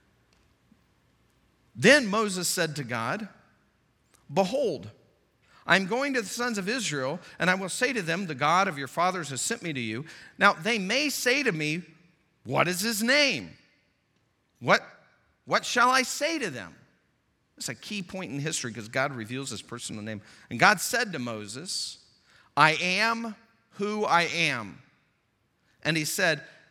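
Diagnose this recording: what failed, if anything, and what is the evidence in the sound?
Nothing failed in this recording, and the sound shows no evidence of a fault at any stage.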